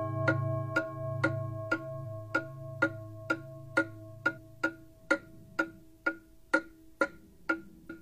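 At 4.32–4.39 s, 6.97–7.02 s and 7.85–7.90 s, damaged data in a compressed stream makes the decoder misread frames, producing short glitches seen as waveform discontinuities.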